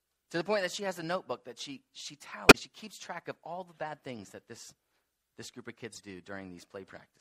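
MP3 compression runs throughout the audio, which sounds watery and swirly with a dulled top end and smeared attacks. The likely cause is an encoder short of bits, consistent with a 64 kbps encode, cutting treble at a fixed frequency and switching weak frequency lines on and off between frames. Corrupt frames decoded appear at 2.49 to 2.55 s as a loud error and at 5.92 to 6.01 s as a much fainter one. In each case, damaged frame data was played anyway, putting energy at wrong frequencies for roughly two or three frames.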